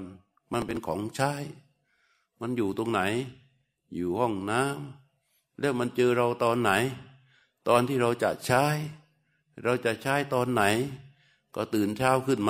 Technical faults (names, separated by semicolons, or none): processor overload crackle